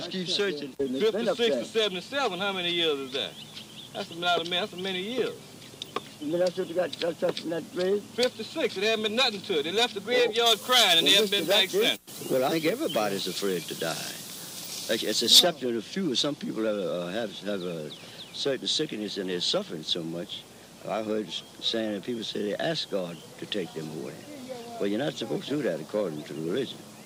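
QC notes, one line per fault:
10.46 to 15.39 s, pre-emphasis left on: treble boosted about 13 dB at 10 kHz versus 1 kHz, an FM 75 µs curve never undone, so it's thin, bright and hissy.
12.50 s, 25.47 s and 26.71 s, compressed frames skipped: jumps ahead roughly 150, 100 and 100 ms, a few 42.7 ms frames lost.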